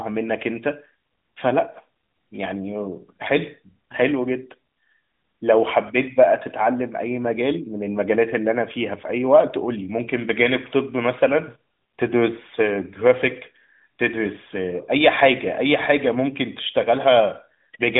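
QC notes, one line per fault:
No faults found in this speech clip.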